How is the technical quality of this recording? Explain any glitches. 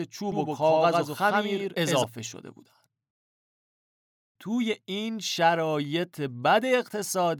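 There's one glitch worth flagging: a doubled audio track from 0.32 to 2.04 s. A second full-band copy of the speech trails the original by about a tenth of a second at roughly equal level, likely from a slower capture path or misaligned edit, so it sounds like a dry, hard echo that snaps on and off.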